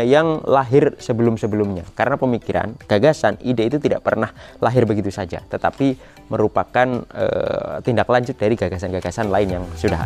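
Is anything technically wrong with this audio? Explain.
No, nothing in this audio points to a technical problem with how the signal was captured, processed or delivered.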